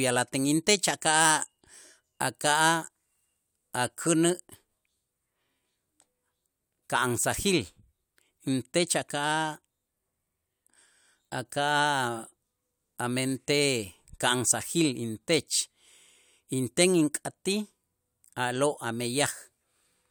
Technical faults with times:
none

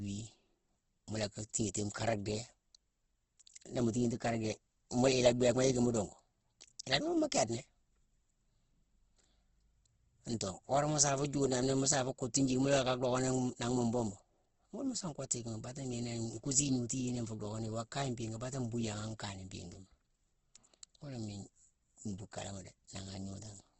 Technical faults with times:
0.00-23.80 Opus compression

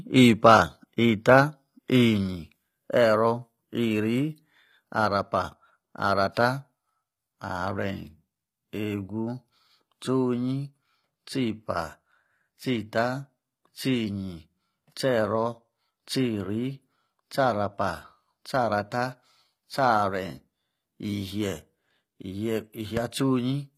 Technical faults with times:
0.00-23.77 HE-AAC compression
22.97-22.99 loud pop

